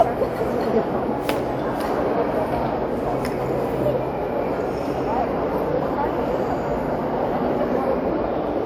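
All the way through there's a swirly, smeared, hollow quality with blurred attacks, worse than a 128 kbit/s WMA-style encode would give on its own. That's likely generation loss from around ten re-encodes, each adding fresh quantisation noise, with content still reaching 20.1 kHz.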